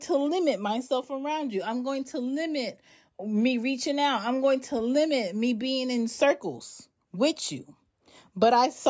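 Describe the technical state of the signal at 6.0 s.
At 6.0 s the speech signal is intact, with no audible dropout, distortion, glitch or other technical fault at that moment.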